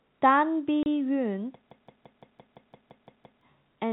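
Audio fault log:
0.83 to 0.86 s, packet loss filled with silence: a 30 ms gap where the sound simply drops to nothing and then resumes. The receiver had no data for that stretch and inserted digital silence rather than concealing it, so the hole has abrupt edges on both sides. The length fits three consecutive 10 ms packets going missing together.
1.71 to 3.41 s, system hang loop: the same 170.67 ms fragment repeats exactly, ten times over, giving a rhythmic stutter at about 5.9 Hz. The playback side stalled while the audio hardware kept reading the same ring buffer, whose length fits an 8192-sample buffer, so it replayed one stale chunk until the system recovered. Roughly one and a half seconds of new audio never arrived, and the narrow telephone band caps the looped sound below 4 kHz.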